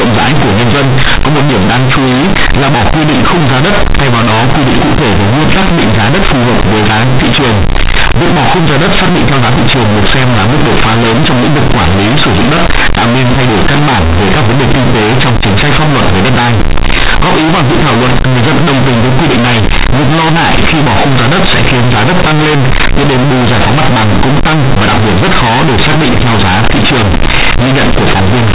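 From start to finish the speech suffers companded audio read as linear: mu-law bytes are played as plain 8-bit samples without expansion, so every sign change swings hard. It sounds loud and buzzy, with noisy pauses; the waveform looks large and bent out of shape throughout, and the spectrogram shows broadband smearing.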